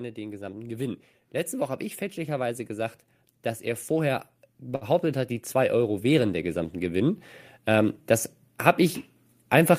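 Automatic gain rising: the gain control judged the input too quiet and raised its gain from 0.14 to 2.98 s, then from 3.61 to 8.03 s, by about 5 dB and about 8 dB, so speech and background swell together. A short stall from a late packet: at 4.75 s the jitter buffer ran dry, and the last sound is held for 59 ms before speech resumes with nothing lost.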